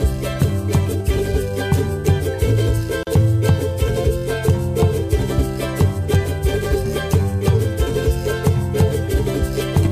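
At about 3.03 s there's a gap at a join of encoded pieces: a silence of roughly 39 ms, ending at 3.07 s, with smeared edges. Separately encoded segments were joined untrimmed, so encoder delay and last-frame padding stayed in before the sound resumes.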